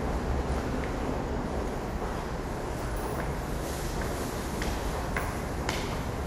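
Throughout, the sound is dulled and carries a gurgling, granular texture, with nothing above 15.9 kHz, likely MP2 compression at a low rate near 80 kbps. On a spectrogram, upper sub-bands flicker on and off as blocky patches below a hard ceiling.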